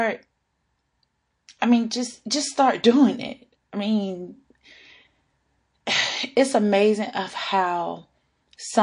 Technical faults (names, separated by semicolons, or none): MP3 compression; pre-echo